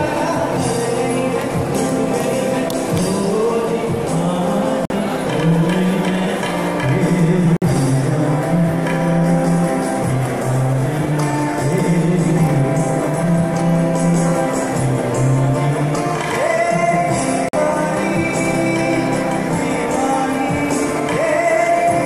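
Gaps at joins of encoded pieces open at 4.85 s, 7.57 s and 17.49 s, brief silences of 48, 52 and 48 ms that cut into otherwise continuous sound, each with edges smeared by the codec. The sound resumes exactly where it stopped, which fits segments encoded separately and spliced without trimming, so each join keeps the encoder's start-up delay and the padded final frame of the previous piece.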